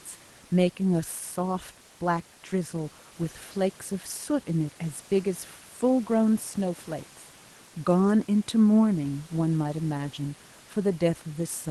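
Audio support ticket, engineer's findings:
No faults found in the speech. Call path audible as a top end rolling off near 12 kHz with the usual codec coding noise, plus room noise about 30 dB below speech.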